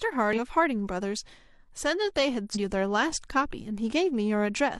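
At 0.33 to 0.39 s and again at 2.51 to 2.57 s, the speech is broken by brief glitches, the signature of damaged data in a compressed stream. Bad bytes in the coded frames make the decoder misread them and lose sync until it finds the next valid frame header. Each event lasts about 60 ms. On a spectrogram it shows as a short block of garbled, smeared energy with hard vertical edges. In the waveform it is an abrupt discontinuity.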